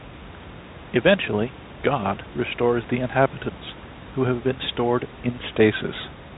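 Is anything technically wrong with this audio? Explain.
No, nothing's wrong here: the speech comes through G.711 telephone coding, so the band stops a little under 4 kHz as that format always does, and the room noise about 18 dB below the speech is simply part of the recording.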